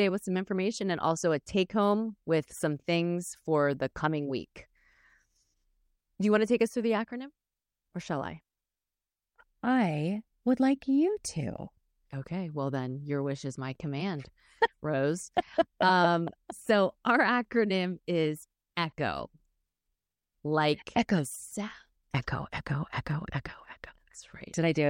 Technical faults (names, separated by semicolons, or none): none